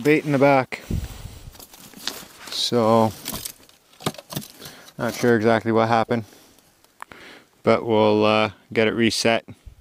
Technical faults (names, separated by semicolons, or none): none